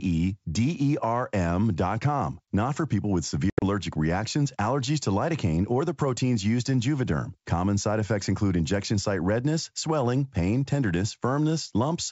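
From 3.50 to 3.63 s, between "for people with" and "reactions allergies to", the speech drops into hard-edged silent gaps, about 110 ms lost over 120 ms with the longest run 80 ms, then resumes slightly distorted. This is packet loss on an ADPCM call, with around ten packets lost. The G.722 decoder's predictor and step size drifted from the sender's and needed some tens of milliseconds to resettle.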